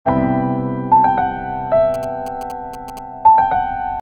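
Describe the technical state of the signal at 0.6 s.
At 0.6 s the signal is intact, with no audible fault at that moment.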